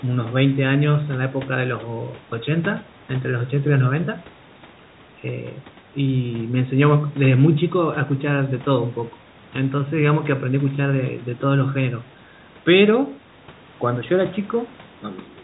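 No technical faults can be heard in the speech at any point.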